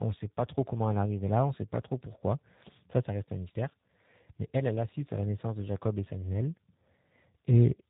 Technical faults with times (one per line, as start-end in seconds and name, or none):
0.00-7.89 tandem speech coding